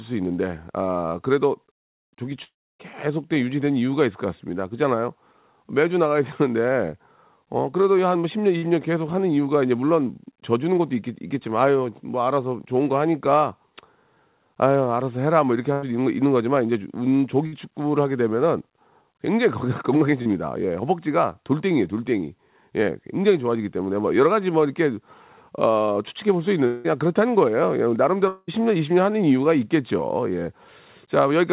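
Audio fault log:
2.44 to 2.81 s, long network dropout: The sound stops and a fading fill covers about 0.35 s, with roughly 0.3 s of near silence. Audio resumes with about 0.36 s missing. A network outage is the likely cause.
8.57, 15.72 and 17.46 s, burst of packet loss: Each gap is filled by the last sound held and turned down. It lasts about 50 to 100 ms and becomes a brief buzz or hiss. The audio then skips ahead, losing 60, 100 and 60 ms.
20.22 to 20.29 s, short concealed packet loss: About 40 ms never arrived in time. The receiver extends the preceding sound for roughly 30 ms and blends back. This gives a small smear or wobble, and the timing shifts by about 10 ms.
26.66 to 26.86 s and 28.28 to 28.50 s, long network dropout: Fill continues the last sound for about 0.18 s and 0.19 s. The second gap ends in a short silence of about 40 ms. Then audio returns without the lost stretch. 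Likely cause: brief network outages.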